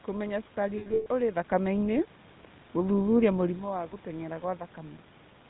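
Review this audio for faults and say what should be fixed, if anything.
GSM full-rate codec, throughout: the audio is band-limited to 4 kHz and has the gravelly, buzzy roughness of a codec that models the vocal tract and drives it with sparse, regularly spaced pulses. This fits 13 kbps GSM full rate. Carrying the call over a wideband codec such as AMR-WB or Opus would prevent this.

Lost GSM frames, 0.78 to 1.07 s: about 220 ms of audio drops out in bursts scattered across 280 ms, with the longest gap around a tenth of a second. Each gap is filled by repeating the last good frame, which produces a rough, metallic held ring. Better radio coverage, or stronger channel error protection and jitter handling, would prevent these losses.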